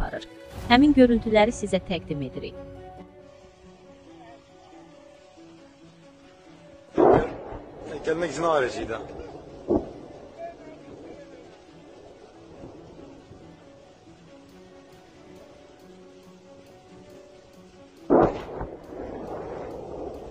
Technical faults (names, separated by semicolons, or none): none